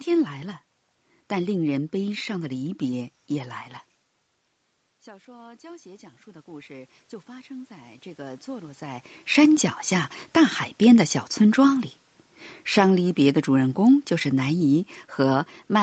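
From 5.04 to 9.09 s you get automatic gain rising: the level drops by about 20 dB, likely from the talker moving away around 4 s, and the gain control slowly pulls it back up by about 12 dB, so speech and room noise swell together.

Then from 12.71 s to the end, automatic gain falling kicks in. The control finds the input too loud or its background too strong, eases its gain back down, and the speech sinks along with the background noise, all within that 8 kHz call bandwidth.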